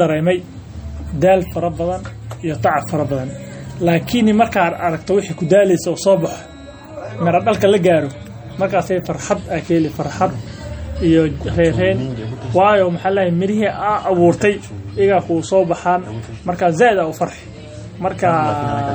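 MP3 compression damage runs throughout the speech, likely from low-bitrate encoding, consistent with about 48 kbps. Starved of bits, the encoder drops weak frequency lines that flicker between frames, giving a watery, swirling texture and metallic chirps on s sounds.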